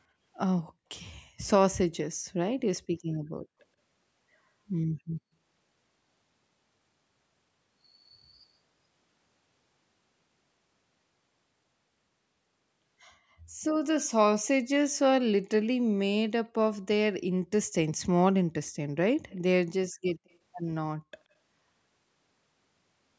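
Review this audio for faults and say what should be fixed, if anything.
Echo leak at 18.66–18.71 s, 19.30–19.41 s and 20.30–20.36 s. Very faint copies of the speech return 127 ms late, likely from incomplete echo cancellation on a loudspeaker. To prevent it, use a headset on the loudspeaker side or strengthen its echo cancellation.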